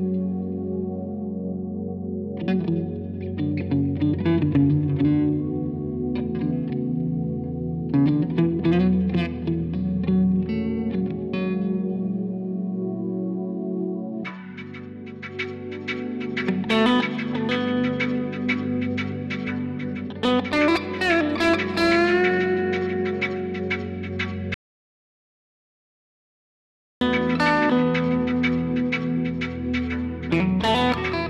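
At 24.54 s the sound stops dead and the clip falls into silence, with no room tone or background hiss underneath, until it cuts back in mid-flow at 27.01 s. This is an audio dropout to silence lasting about 2.47 s, and whatever occurred in that stretch is simply missing. The likely cause is the input signal being lost, through a disconnected source, broken link or accidental mute, while recording continued writing silence.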